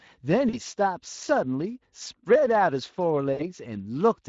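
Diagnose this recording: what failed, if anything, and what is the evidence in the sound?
At the codec stage, the whole clip carries plainly audible Speex codec damage. The speech sounds rough and hoarse because the CELP coder has too few bits to model the excitation faithfully. The degree of roughness fits a middle quality setting of around 20 kbps. On a spectrogram, harmonics look smeared and grainy rather than cleanly striated. Noisy texture fills the gaps between them, and the waveform has a fuzzy, less periodic fine structure.

At the network stage, the speech decoder concealed VoIP packet loss at 0.49–0.59 s and 3.33–3.44 s. In each span, the speech is stretched into a buzzy tone or coloured noise that fades out, and it stays weak for a moment after the signal resumes. The decoder repeated its last pitch and filter with falling gain. The lengths point to about 40 ms and 60 ms of missing audio. 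A spectrogram would show frozen, flat harmonics dimming away, and the waveform's envelope would sag.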